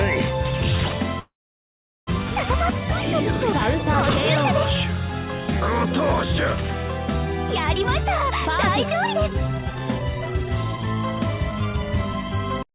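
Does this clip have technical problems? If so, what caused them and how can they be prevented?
Yes. From 1.19 to 2.09 s the sound stretches into a fading buzz or hiss, then about 0.74 s of silence, before resuming exactly where it stopped. This is a call audio freeze, likely from delayed packets draining the jitter buffer and inserting an 880 ms gap with nothing lost. A more stable network path or a deeper jitter buffer would prevent it.

From 8.85 to 12.73 s the audio sounds hurried, running about 19% fast at unchanged pitch. This is a jitter buffer speed-up: the receiver trimmed short pitch-period slices, roughly 0.7 s in all, to shed excess buffered delay. Avoiding the delay spikes that overfill the buffer, or letting it drain more gradually, would prevent this.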